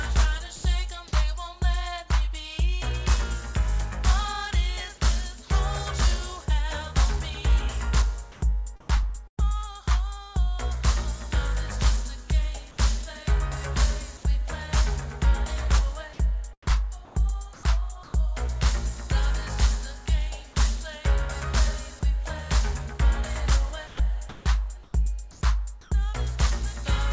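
At 0.56 s the sound drops out for about 80 ms and steady noise replaces it, with roughly 70 ms of sound lost. This is sound dropped by the voice detector. The detector likely mistook it for background and stopped sending.

From 8.32 to 9.39 s the real background gives way to a flat, featureless hiss. This is comfort noise in place of the background. Transmission paused and the receiver synthesised noise, likely because no speech was detected.

At 9.27 to 9.39 s there is a burst of packet loss. About 100 ms goes missing. The receiver stretches the last sound and fades it before the audio resumes further on.

The same comfort noise returns from 16.71 to 18.13 s and again from 23.87 to 25.91 s. In both, the background turns steady and loses its detail.

At 23.97 s the sound starts abruptly, its first 20 ms missing. This is an onset clipped by the voice detector, likely slow to register that sound had resumed.

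Throughout, nothing is heard above 8 kHz, which fits the G.722 call codec.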